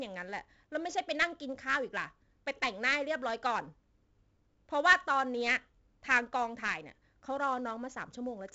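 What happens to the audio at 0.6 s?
At 0.6 s, as throughout, there is 4-bit ADPCM compression. Coarse adaptive steps add heavy grit that follows the level, with nothing above 7.8 kHz, consistent with 64 kbps.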